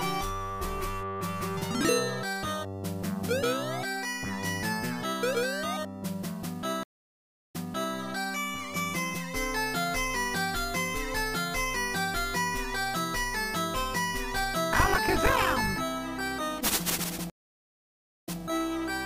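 Stream reconnect at 6.83 to 7.95 s and again at 17.30 to 18.39 s: the connection dropped and a fresh decoder restarted mid-stream. Silence lasts 0.67 s, then 0.94 s, and each time the audio resumes slightly earlier, repeating 0.44 s and then 0.16 s of material the server sent again.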